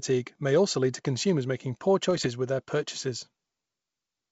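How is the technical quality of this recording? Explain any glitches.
One glitch stands out in an otherwise clean wideband speech sound, consistent with full-rate G.722. Bit errors on an ADPCM link occur from 2.11 to 2.26 s, between "to consumers making poor" and "with their purchases". At a rough error rate of about half a percent, each corrupted bit throws the decoder's step size and predictor off, so the damage rings on briefly and is heard as pops and a rough burst with momentary level jumps.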